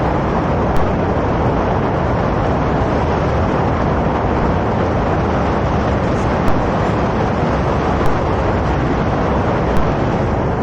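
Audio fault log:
0.77–6.48 s and 8.06–9.77 s, DC step: the waveform's zero line jumps away from centre at 0.77 s and the offset ends at 6.48 s, then does the same from 8.06 to 9.77 s. Each sudden shift of the baseline is heard as a low thump or click, while the sound riding on it carries on unchanged. On the waveform the whole trace sits visibly offset between the edges, and the spectrogram shows a brief broadband stripe with a low-frequency smear at each step edge.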